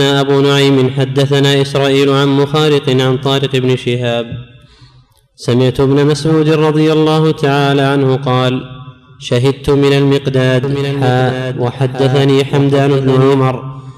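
From 10.64 s to 13.40 s a doubled audio track appears: a full-band copy trails about a second behind, a few decibels quieter, likely picked up by a slower path. It cuts in and out abruptly, and a spectrogram shows every pattern repeated a second later.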